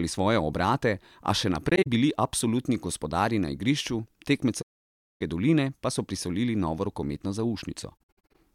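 A speech clip with AAC frame loss with muting, heard as soft-faded holes: 1.69 to 1.87 s after "svoje obrate a še", a long gap from 4.61 to 5.21 s, and 7.98 to 8.35 s after "so prisolili novo rokometno". The decoder is zeroing lost frames and the overlapping windows blur the edges.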